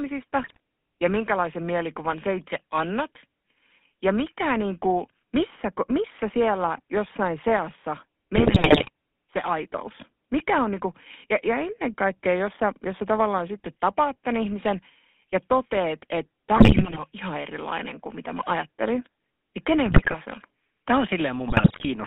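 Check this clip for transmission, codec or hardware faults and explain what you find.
The speech has two faults: GSM full-rate codec coloration throughout, and five bursts of GSM bit errors.

The GSM full-rate codec damage runs the whole length. The band is confined to roughly 200 Hz to 3.5 kHz, so the voice is thin and lacks air. The coder represents the vocal tract with a filter and excites it with a sparse, regularly spaced pulse train, which fits a 13 kbps full-rate stream. That coarse excitation gives the voice a plainly audible buzzy, gravelly roughness.

GSM bit errors occur at 0.42–0.60 s just before "ja minkälaisen mielikuvan sä", at 8.36–8.89 s between "missä siellä jossain seassa" and "se aitous", at 16.56–17.00 s between "ihmisen ja toteet että" and "on ihan erilainen kuin", and at 19.86–20.15 s and 21.48–21.87 s. In each burst, corrupted bits reached the decoder. Wrong filter, pitch and gain parameters warp the spectrum and make the level jump, so the voice breaks into squawks, pops and gargling for those spans.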